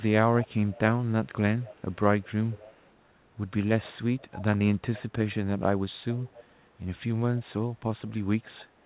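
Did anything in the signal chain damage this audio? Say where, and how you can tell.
Yes, there's an echo leak, which points to the call-processing stage. A faint delayed copy of the speech, around 20 to 30 dB under the main signal, trails it by about 269 ms at 0.42–0.79, 1.58–1.96, 2.21–2.30, 2.48–2.91, 4.20–4.43, 6.18–6.54 and 8.44–8.65 s. A steady lag like that is likely a far-end loudspeaker feeding its own mic, with the echo canceller letting scraps slip through and back down the line. It sits inside narrowband audio with nothing above 4 kHz.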